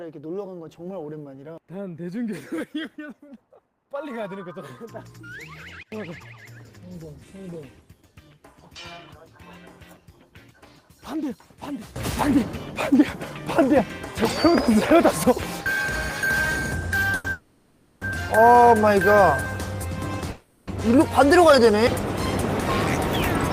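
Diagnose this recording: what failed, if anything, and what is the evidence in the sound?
Sudden gain jump, digital gain stage: level and noise floor drop about 22 dB at 5.83 s for 0.09 s, then rise about 16 dB at 11.96 s to the end. The likely cause is a gain change applied without a ramp.

Short stall from a late packet, network jitter buffer: at 17.15 s the last sound holds for 90 ms until the late packet arrives, and then playback resumes with nothing lost.

Call audio freeze, network: at 17.32 s for 690 ms and at 20.31 s for 360 ms, the sound continues as a fading buzz before resuming. Delayed packets likely emptied the jitter buffer.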